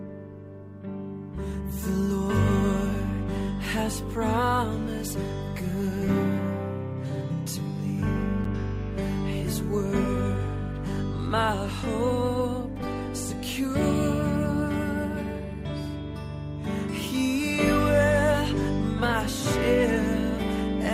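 At 8.44 s, a gap between stream segments: two timestamps fail to meet, so the player inserts 9.3 ms of silence, heard as a brief, hard-edged dropout.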